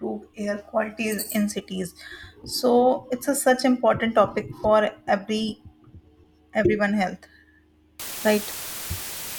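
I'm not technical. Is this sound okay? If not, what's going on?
No. From about 8.00 s to the end at 9.38 s, the speech is covered by a loud, steady hiss, almost as strong as the voice. This is low bit depth with dither. The sound was stored with very coarse steps, only 5 bits, and a little random noise was added before rounding, which turns the rounding errors into even hiss. Without that added noise the speech would sound gritty or buzzy. Here the voice stays clean, just heard under constant hiss.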